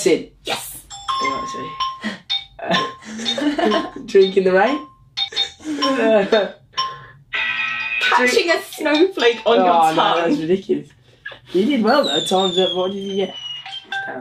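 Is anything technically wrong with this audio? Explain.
No, nothing technically wrong is audible anywhere in this clip.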